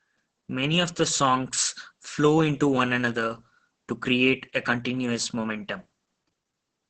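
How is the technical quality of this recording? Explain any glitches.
The technical quality is poor, with heavy Opus voice compression throughout the speech. The speech sounds muffled, hoarse and slightly robotic because the coder narrows the band and reduces the excitation to a coarse approximation. The roughness points to a very low bitrate, near 10 kbps, in SILK mode. On a spectrogram, energy stops sharply near 8 kHz, and harmonics look smeared and grainy rather than cleanly striated.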